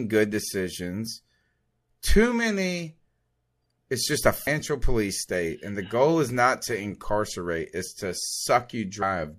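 At 4.46 s, between "it's just a" and "police state and the", and again at 9.01 s, damaged data in the compressed stream yields a brief glitch: the decoder misreads corrupt frames and resyncs at the next header.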